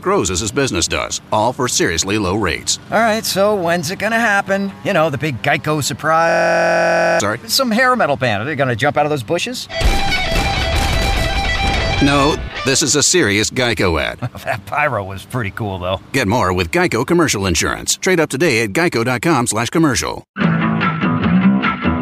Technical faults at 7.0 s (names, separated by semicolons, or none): system hang loop